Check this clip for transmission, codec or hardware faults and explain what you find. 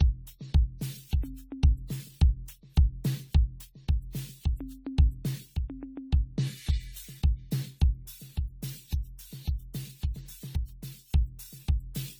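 The music shows one codec fault. Throughout, generation loss: the sound is swirly, hollow and smeared, with blurred attacks, likely from around fifteen AAC-LC re-encodes at roughly 64 kbit/s. A spectrogram shows accumulating holes and smeared transients below 20 kHz.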